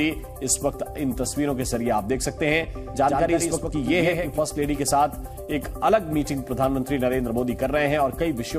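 A second, slower capture path or an out-of-step edit likely mixes the audio in twice, producing a doubled audio track from 2.77 to 4.39 s. A full-band copy trails roughly a tenth of a second behind, about 5 dB quieter, without decay or room colour, starting and stopping abruptly.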